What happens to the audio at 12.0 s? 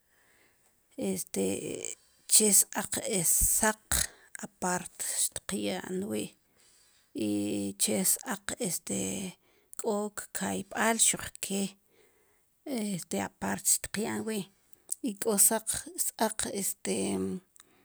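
Nothing goes wrong at 12.0 s; the speech carries on intact through that moment.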